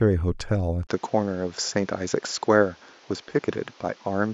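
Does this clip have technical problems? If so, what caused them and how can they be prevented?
Yes. At 0.87 s, after a 20 ms silence, the sound turns duller to the end, with nothing above 7.3 kHz and new background noise roughly 30 dB down, at much the same level. The input likely switched to a poorer device. A plain low-pass filter would not add the gap or the new noise. To prevent this, lock the recording input to one device so the system cannot switch mid-recording.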